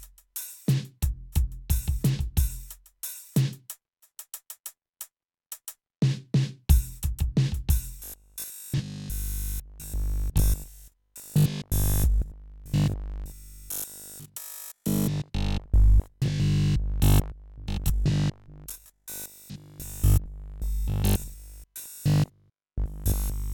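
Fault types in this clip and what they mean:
Robotic sound from repeated short buffers: from about 8.00 s to the end at 23.54 s, the music collapses into a rigid, metallic buzz pitched at 50 Hz, likely because audio arrives too slowly and each 20 ms stretch is replayed in place of fresh signal, essentially throughout. The repetition is continuous, imposing one fixed pitch while the music's rough contour still shows through.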